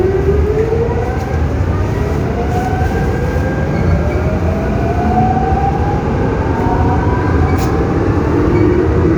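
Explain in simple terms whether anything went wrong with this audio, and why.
AAC frame loss with concealment, at 3.17 to 3.23 s. For about 43 ms, a gap the length of a single lost frame, part of the compressed audio never arrived. The decoder covered the hole by reusing the character of the last good moment of sound, with its details shuffled, instead of leaving silence. Because the gap is so short, it isn't heard as a dropout. It comes across as a brief smeared, noisy or hollow patch before the audio picks up cleanly again.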